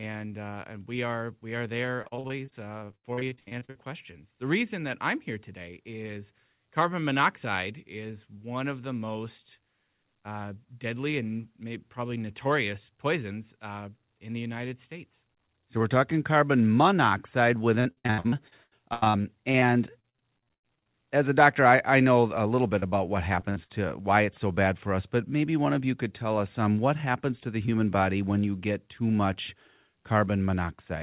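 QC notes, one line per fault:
1.96–3.77 s, repeated packet loss (robotic sound): 21 gaps, the longest 80 ms, each patched by stretching the previous sound, so about a third of the span is synthetic and choppy. On the spectrogram, harmonics freeze into flat repeated blocks.
17.81–19.64 s, repeated packet loss (robotic sound): 15 gaps, the longest 85 ms, concealed by repeating the last sound. The waveform shows identical copied cycles between real segments, and the result sounds robotic and clipped.
20.00–20.88 s, repeated packet loss (robotic sound): 10 gaps, the longest 95 ms, with about 37% of the span filled in. The spectrogram shows smeared, static harmonic stripes interrupting the normal formant movement.
22.80–22.84 s, 22.90–22.94 s and 23.40–23.44 s, short concealed packet loss: about 20 ms is missing each time, patched from the preceding sound, which gives a brief smear or wobble. 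The waveform shows a tiny repeated section.
23.50–23.58 s and 23.64–23.71 s, burst of packet loss: about 60 ms is lost each time, and the last sound is held and faded. The held sound shows a decaying envelope below the 4 kHz ceiling of the G.711 path.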